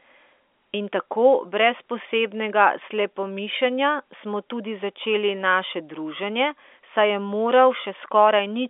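The speech carries no technical faults, and it comes over an ordinary G.711 A-law telephone channel at 64 kbps, so everything sits within the 300 to 3500 Hz line band with nothing above about 3.7 kHz, as that format dictates.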